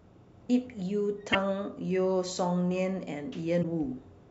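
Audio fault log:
1.29–1.35 s and 3.59–3.65 s, damaged data in a compressed stream: two short bursts, each about 60 ms long, break into the speech. Corrupted bytes in the compressed stream make the decoder misread those frames and lose sync until it finds the next valid frame header.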